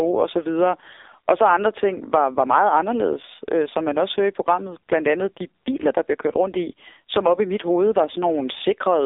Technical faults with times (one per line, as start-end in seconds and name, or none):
0.00-9.06 AMR narrowband mobile codec